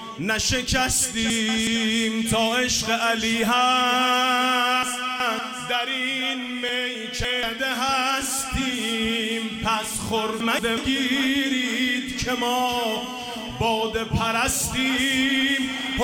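Chunks out of order occur at 1.30 to 1.67 s, 4.83 to 5.39 s, 6.69 to 7.43 s and 10.40 to 10.77 s. A block of about 186 ms plays one, two, three, then one block late, so the sound briefly jumbles.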